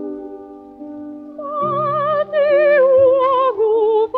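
No technical faults are audible anywhere in the recording.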